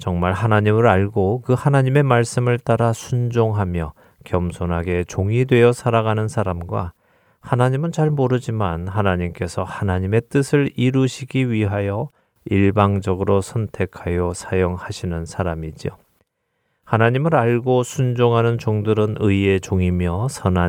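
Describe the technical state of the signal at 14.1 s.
At 14.1 s the speech signal is intact, with no audible fault at that moment.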